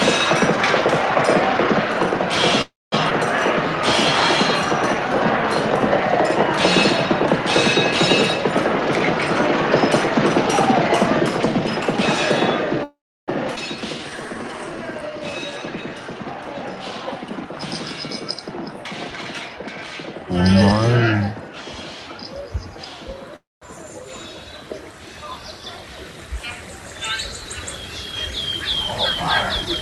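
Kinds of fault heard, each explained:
Call audio freeze: Playback stalls at 2.61, 12.84 and 23.36 s, likely because packets were delayed and the jitter buffer ran dry. Each stall fills with a fading continuation, then silence, inserting gaps of 0.31, 0.44 and 0.26 s before the audio resumes where it left off.
Skip ahead: At 3.10 s about a tenth of a second of audio is dropped, and at 13.56 s roughly 0.3 s. In both cases the material on either side is spliced almost directly together, so the sound jumps forward with no perceptible pause.
Jitter buffer speed-up: Pitch-period-sized pieces are cut repeatedly to shrink excess buffered delay, so the sound runs faster without a pitch change. It runs 6% fast from 8.64 to 9.31 s, 11% fast from 15.95 to 20.37 s (about half a second removed), and 31% fast in the final 0.2 s.
Jitter buffer slow-down: From 13.81 to 15.90 s the receiver rebuilds its reserve by repeating single pitch periods and pause fragments. 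This adds 230 ms and plays at 89% speed. Pitch is unchanged, but sounds are audibly drawn out.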